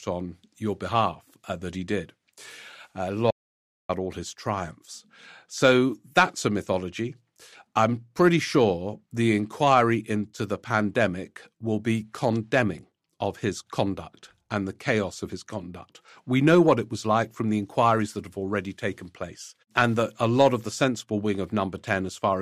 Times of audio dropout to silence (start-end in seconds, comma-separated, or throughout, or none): 3.31-3.89